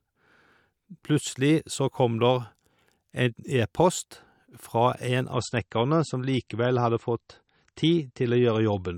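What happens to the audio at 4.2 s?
Nothing goes wrong at 4.2 s; the speech runs through that moment intact, with no dropout, click or other fault.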